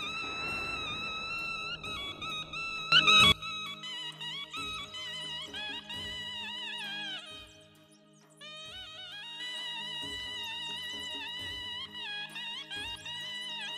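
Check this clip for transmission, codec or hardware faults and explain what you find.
Two sudden gain jumps occur. From 2.92 to 3.32 s the level leaps up by about 18 dB, and from 7.2 to 9.4 s it drops by about 6 dB. Each time, sound and background noise shift together, instantly rather than gliding as automatic gain control would. The likely cause is a gain setting applied without a ramp.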